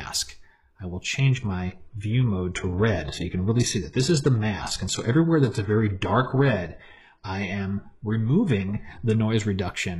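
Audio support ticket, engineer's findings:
Adaptive stream at a lower bitrate, 1.19 to 9.19 s. Sudden quality drop, no gap. Nothing above 11.5 kHz. Treble thin, codec artefacts up. Player switched to a lower-bitrate rendition after the connection slowed, consistent with roughly 12 kbit/s HE-AAC.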